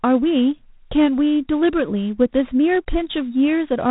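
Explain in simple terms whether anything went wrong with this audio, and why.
Something did go wrong: from the first moment to the last, the speech carries a harsh, rasping hiss typical of G.726 ADPCM at a low setting. This telephone-style coding doesn't store the sound itself. It guesses each next moment and saves only how wrong the guess was, using very few bits. Those coarse corrections turn into grit that rises and falls with the speech, unlike ordinary background hiss, which stays steady through the pauses.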